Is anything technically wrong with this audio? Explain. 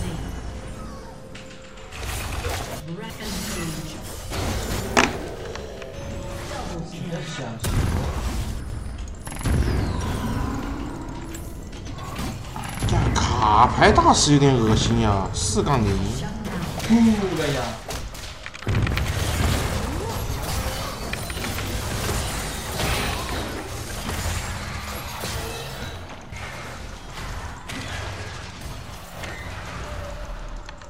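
Yes. Chunks out of order occur at 2.8–3.2 s, 4.5–4.8 s and 8.6–8.8 s. In each, a 100 ms chunk arrives late and plays three, two and one chunks after its proper place. The moment sounds jumbled, with three hard joins. Unlike a dropout or a stutter, none of the audio is missing or repeated. The same material is simply heard in the wrong order.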